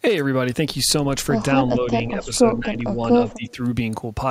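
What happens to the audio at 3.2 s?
Right there the speech dips sharply, roughly 15 dB, from 3.16 to 3.58 s: speech suppressed in double talk, likely an echo canceller ducking the talker during overlap.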